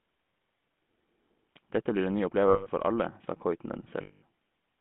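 Throughout, the speech has a buzzy, gravelly roughness and sits in a narrow band from about 150 Hz to 3.5 kHz. This is the GSM full-rate codec, which fits a 13 kbps stream. It rebuilds the voice from a vocal-tract model driven by coarsely sampled pulses, which leaves plainly audible damage.

From 2.48 to 2.68 s, just before "for alle sa", and again from 4.02 to 4.23 s, the sound freezes into a rough, metallic ring. These are lost GSM frames, about 180 ms and 200 ms long. The decoder keeps replaying the last good frame's settings, which fits runs of nine and ten lost frames.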